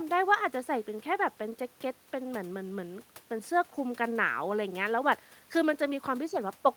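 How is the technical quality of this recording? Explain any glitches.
No glitches or technical faults can be heard here.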